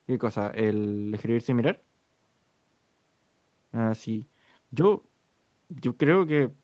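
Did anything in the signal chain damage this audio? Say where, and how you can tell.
No, nothing in the signal chain damaged this speech.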